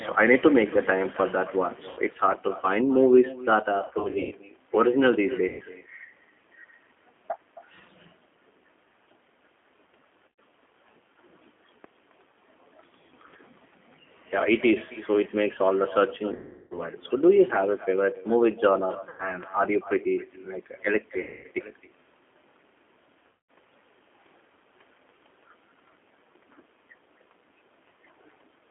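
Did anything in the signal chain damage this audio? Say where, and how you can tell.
Yes. At the call-processing stage, every phrase is trailed by a quieter, thinner copy, about 19 dB down and roughly a third of a second late. That is echo with no canceller: the far end's loudspeaker leaks into its microphone, and nothing removes it before it returns.

At the codec stage, the whole speech clip sits in a narrow 250 Hz to 3.4 kHz band with a plainly audible rough, synthetic texture. That fits the G.729 codec at 8 kbit/s, which rebuilds speech from a filter, pitch predictor and sparse pulses rather than sending the waveform.

At the network stage, there is VoIP packet loss concealed by the speech codec. The speech turns into fading buzzy or smeared tones at 1.89–2.00 s, 3.79–4.35 s (scattered gaps, longest 120 ms), 5.48–5.64 s, 10.28–10.40 s, 16.35–16.81 s, 19.09–19.29 s, 21.24–21.47 s and 23.27–23.49 s. 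Each time, the decoder extrapolated its last frame across the missing audio, about 80 to 360 ms per event.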